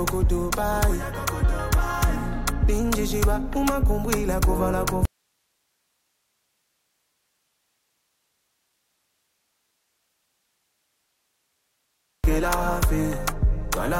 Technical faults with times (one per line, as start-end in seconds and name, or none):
5.05-12.24 audio dropout to a faint residue